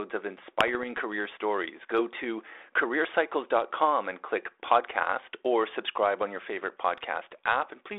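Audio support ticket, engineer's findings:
Bit errors on an ADPCM link, 0.59 to 0.85 s: pops, rough bursts, brief level jumps, on a 32 kbit/s G.726 link limited to 300 Hz to 3.6 kHz. Around one bit in a thousand flipped, fitting about four damaged frames. Each error knocks decoder step size and predictor off.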